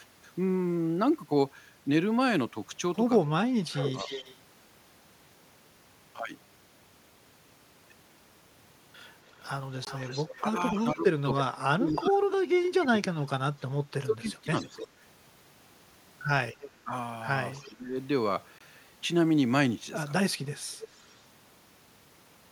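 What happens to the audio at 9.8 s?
At 9.85 s the sound cuts out for about 20 ms, until 9.87 s. This is a Bluetooth dropout, likely one late packet discarded before reaching the headphones, leaving a silent hole.

Around it, from 9.28 to 13.06 s, a faint copy trails the speech by 290 ms. This is likely echo leak, the far loudspeaker's sound slipping past its echo canceller and returning well below the direct speech.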